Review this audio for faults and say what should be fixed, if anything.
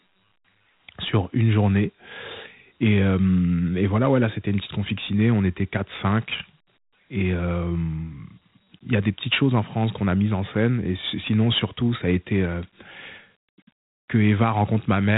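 Dialogic VOX ADPCM coding runs through the whole speech clip, and the damage is plainly audible. Each sample is stored as a 4-bit step relative to a running prediction, so the quantisation error rides along with the speech as a gritty hiss. Nothing exists above 3.8 kHz, which fits 8 kHz sampling at 32 kbps. A spectrogram shows a hard ceiling at 3.8 kHz with grainy noise filling the band wherever speech is present. To prevent it, keep a linear PCM or wideband master and convert to VOX only for the telephony system.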